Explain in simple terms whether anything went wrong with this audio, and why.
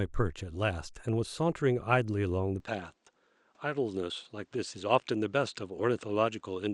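At about 2.6 seconds the speech loses its top end and stays that way to the end: nothing above 9 kHz survives, so it sounds duller. There's no gap and no jump in loudness at that moment, but a faint new background noise arrives with the change. That added noise, with its own character, is what separates this from a simple filter or compression setting, and points to the likely cause: the input switched to a poorer device.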